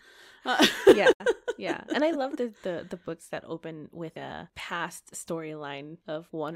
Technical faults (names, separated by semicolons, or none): digital broadcast dropout